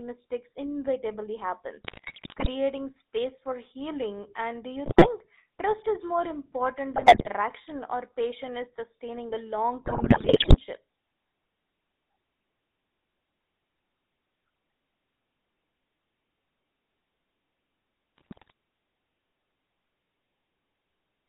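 GSM full-rate coding runs through the whole clip, with plainly audible damage. The speech has been squeezed through the original GSM codec, which fits its 13 kbps rate. The codec keeps a vocal-tract filter and replaces the fine detail of the excitation with a coarse train of regularly spaced pulses, so the voice takes on a buzzy, gravelly grain. The band is held to roughly 250 Hz to 3.7 kHz, leaving it thin and muffled.

GSM bit errors break through at 1.84 to 2.49 s, after "mistakes inevitably" and before "space for healing"; at 4.86 to 5.08 s; at 6.94 to 7.27 s, after "trust is more important"; at 9.84 to 10.56 s, after "passion is sustaining a"; and at 18.17 to 18.52 s. Corrupted bits reach the decoder and scramble its filter, pitch and gain values frame by frame. The spectrum warps and the level jumps, so each burst collapses into squawks, pops and gargling. The two longest bursts are near 2 s and 10 s.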